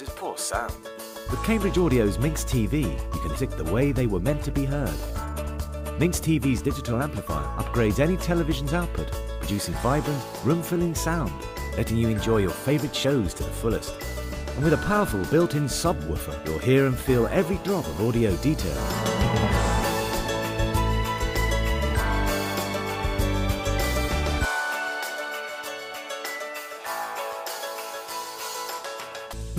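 At about 3.35 s there's a skip ahead: roughly a second of audio got dropped and playback jumps straight to later sound with essentially no gap. Then from 5.06 to 6.67 s a jitter buffer speed-up kicks in. The receiver trims tiny pitch-period slices to shed around a third of a second of excess delay, so the sound runs about 18% fast at the same pitch and feels hurried.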